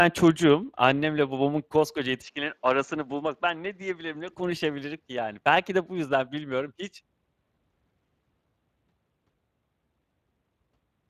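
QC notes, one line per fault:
Throughout: Speex codec. Plainly audible CELP damage: too few bits for the excitation leave the speech hoarse and noisy, consistent with a rate near 22 kbps. Content stops at 15.4 kHz. Unlike transform codecs, it gives grainy roughness rather than swirling or pre-echo.
2.22–4.31 s: input switched to a poorer device, likely the cause. The band abruptly narrows to 8.1 kHz, the level drops about 5 dB, and a new noise floor appears roughly 40 dB down. There's no gap at the switch, and the sound clears again at 4.31 s.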